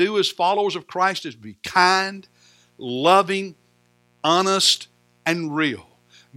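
From 1.88 s, after "is be", mains buzz sets in and lasts to the end. Switching spikes twice in every 60 Hz cycle add a faint, raspy buzz about 40 dB below the speech.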